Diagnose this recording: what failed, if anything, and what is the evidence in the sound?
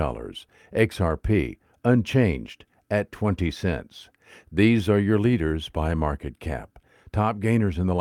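Nothing in this speech recording points to a failure at any stage of the chain. No audible evidence singles out a stage for further investigation.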